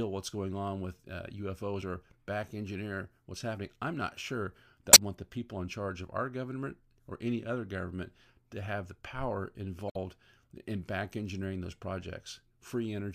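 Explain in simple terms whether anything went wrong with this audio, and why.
Yes: damaged data in a compressed stream causes brief glitches at 1.79 s (after "going on with uh"), 4.90 s (after "happening I'm not sure") and 9.87 s (after "to have the power"). The decoder misreads corrupted bytes and loses its place.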